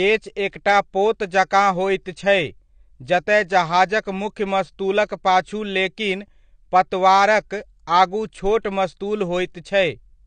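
Speech with AAC compression damage throughout: the top end stops dead at 9 kHz, and the sound is dull and smeared with a warbling, fizzy edge on sustained sounds and sibilants. This plainly audible damage likely comes from AAC-LC at a low bitrate around 32 kbps.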